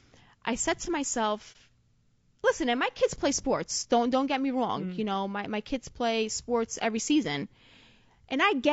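Throughout, the speech sounds rough and grainy, with noise filling between harmonics, likely from low-delay AAC compression at a low rate, around 32 kbps. From 1.52 to 1.56 s, AAC frame loss with muting leaves a brief dip that fades out and back, unlike a hard dropout, and fits a single lost frame.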